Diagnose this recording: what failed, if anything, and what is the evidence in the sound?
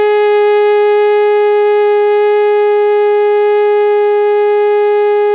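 Nothing failed: the music comes over a WebRTC call path working as designed, with the G.711 mu-law coding at 64 kbps leaving nothing above 4 kHz, which is the expected band limit of that narrowband codec rather than a defect.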